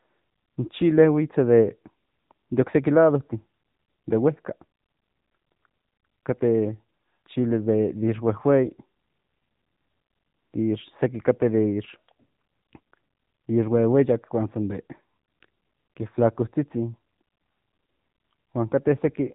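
Speech, carried end to end through the AMR narrowband mobile codec, so nothing above about 3.8 kHz survives and the sibilants and consonant edges sound dull and boxed-in. The codec damage is plainly audible: the voice has a buzzy, synthetic quality because the codec rebuilds it from a vocal-tract model and a sparse pulse excitation rather than the waveform itself. The depth of the artefacts points to a mid-range AMR-NB mode, around 7.95 kbps.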